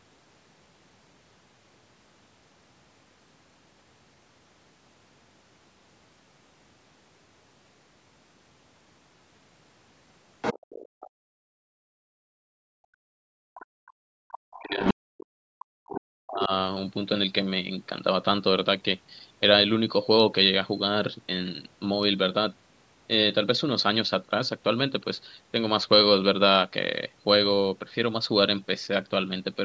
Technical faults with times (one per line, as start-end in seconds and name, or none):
10.41-11.10 other side's voice leaking through
10.88-13.53 background gated by the echo canceller
13.54-13.66 other side's voice leaking through
13.81-16.51 speech suppressed in double talk
14.32-14.58 other side's voice leaking through
14.84-14.93 other side's voice leaking through